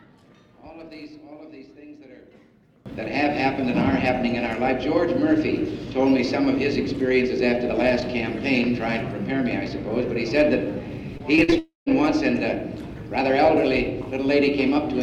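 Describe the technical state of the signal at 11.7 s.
At 11.7 s the signal sits inside a burst of repeated packet loss (robotic sound), running from 11.17 to 11.91 s. Six short holes, the longest 45 ms, are each patched by stretching the preceding sound, so about 16% of that span is synthetic fill. The result is choppy. On a spectrogram this shows as brief smeared, comb-like vertical bands where fresh detail stops. In the waveform, small repeated-looking segments interrupt the natural envelope.

Overlapping it, from 11.59 to 12.02 s, is a longer gap, likely a long network dropout. The last sound is continued as a fading buzz or hiss for roughly 0.28 s, then about 160 ms of silence follows before audio resumes with that stretch missing. A spectrogram shows a decaying, harmonically flat smear that thins into an empty band. The waveform tapers to a near-flat line, then restarts.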